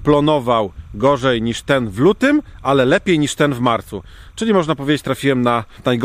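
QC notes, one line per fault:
Throughout: timecode bleed. A faint chirping warble sits behind the sound, roughly 45 dB down. Linear timecode from a nearby track or cable is leaking in. Its square wave flips between tones around 1 and 2 kHz, with the code running at 29.97 frames per second.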